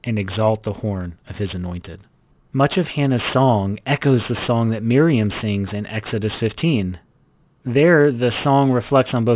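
A speech recording with aliasing running through its whole length. The audio sounds as if it was taken down to a low sample rate without an anti-alias filter, and the fold point near 4 kHz fits a drop to about 8 kHz. Energy that sat above 4 kHz has been mirrored back below it at false, unrelated frequencies, roughly 20 dB under the speech. Sibilants come out gritty and metallic, and the spectrum stays dense right up to the 4 kHz edge instead of rolling off.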